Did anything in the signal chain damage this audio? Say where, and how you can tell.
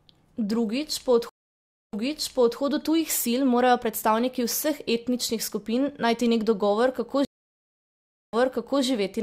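Yes. Network stream reconnect: gaps of 0.64 s at 1.29 s and 1.08 s at 7.25 s, then playback restarts 0.66 s and 0.5 s earlier as resent audio reaches a fresh decoder.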